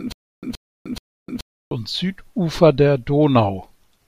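From the very start of the clip until about 1.71 s, a 123 ms burst of speech plays, drops into about 305 ms of dead digital silence, then returns unchanged, repeating three times at a steady 428 ms pace. This stutter with silent gaps likely comes from a stalled player or stream that replayed its last buffered fragment at each retry before running empty, so the speech that belonged in those gaps is lost.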